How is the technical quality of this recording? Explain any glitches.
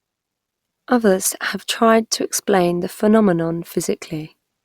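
The technical quality of this recording is good, with no glitches to explain.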